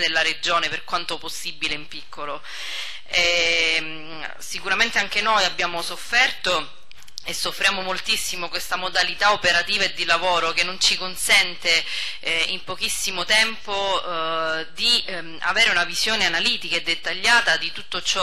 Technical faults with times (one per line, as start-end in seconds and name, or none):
none